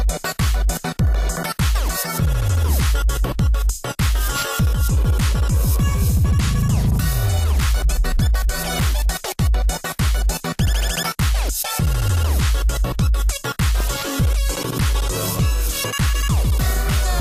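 DAB burbling at 13.80 s and 16.70–16.77 s: bit errors slip past error correction, making single MP2 sub-bands blip rather than dropping out like lost packets.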